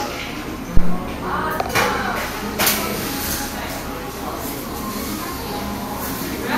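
A recording of everyday sounds opens with a phantom power thump from 0.77 to 1.04 s. A supply was switched on or off on a live input, and the voltage step passed through the coupling capacitors as a deep low-frequency thud that dies away with a decay of about 61 ms. On the waveform it shows as a large, lopsided swing that relaxes back to centre, and on a spectrogram as a short burst of energy confined to the bottom of the frequency range. From 2.67 s to the end, pre-emphasis is left on. The treble was boosted for transmission and the matching de-emphasis cut was never applied, so 10 kHz sits about 13 dB above 1 kHz, which fits a 75 µs FM curve. The result is thin, glassy and sharply sibilant. A spectrogram shows the upper bands visibly brighter from that point on, and the waveform takes on a spikier, more jagged texture.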